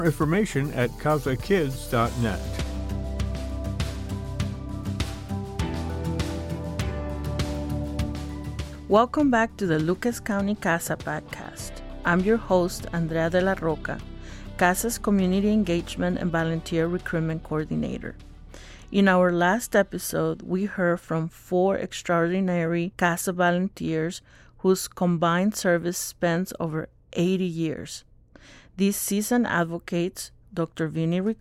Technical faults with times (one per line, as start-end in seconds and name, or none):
4.15 dropped samples
17.92 dropped samples